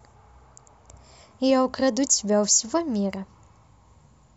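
A scratch on the disc wiped out more data than error correction could rebuild on each rotation, so the player patched or muted those samples. From 2.88 to 3.64 s this gives CD scratch ticks: four brief clicks, roughly five a second, the longest lasting only about 2 milliseconds.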